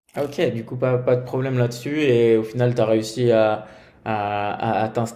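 Nothing goes wrong anywhere in this bit of speech, so there's no technical fault to point to.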